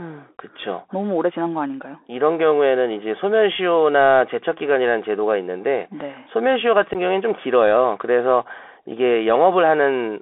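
From start to finish the speech carries the sound of a Bluetooth CVSD headset codec. The band is confined to about 300 Hz to 3.5 kHz, giving a thin, telephone-like quality. CVSD codes each sample as a single up-or-down bit with an adapting step size. That fits a 64 kbps link. Here the coding damage is plainly audible as a granular hiss under the speech, with distortion wherever the step size cannot keep pace with the signal.

At 6.93 to 6.96 s comes unconcealed Bluetooth headset packet loss. About 15 ms of audio is simply missing, roughly two packets' worth between headset and phone. Nothing was done to hide the gap, so the speech drops out abruptly and resumes just as abruptly. The result is a brief hole with hard edges, heard as a short break in the flow of the speech.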